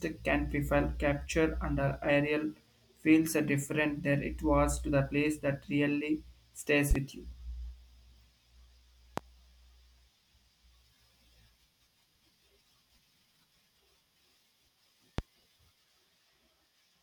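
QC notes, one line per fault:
6.91–6.99 s, loud pop: a double pop just after "place that really stays", each peak roughly 15 dB above the speech. A sudden voltage step, likely from a switch, static or a driver glitch, is added to the signal, and the stages after it shape it into a sharp thump.
9.18–9.21 s, loud pop: a single pulse at a similar level, with the speech continuing underneath.
15.18–15.22 s, loud pop: one more pulse of the same kind, again laid over the running speech.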